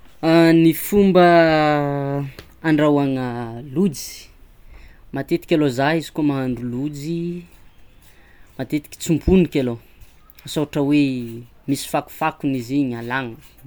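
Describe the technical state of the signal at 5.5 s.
At 5.5 s the speech signal is intact, with no audible technical fault at that moment.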